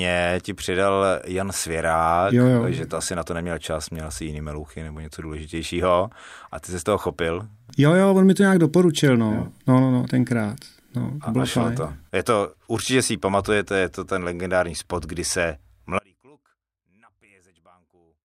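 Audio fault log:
15.99 s to end: audio dropout to a faint residue, after "legendární spot kdy se" the speech cuts abruptly to a faint leak roughly 35 dB down, likely a lost signal feed.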